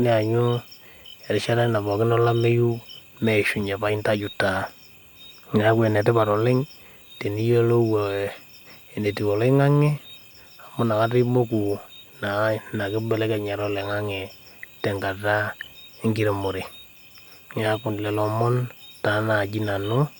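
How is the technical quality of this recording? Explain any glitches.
No glitches or technical faults can be heard here.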